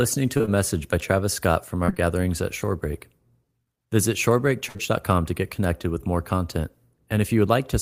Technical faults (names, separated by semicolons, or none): short concealed packet loss; burst of packet loss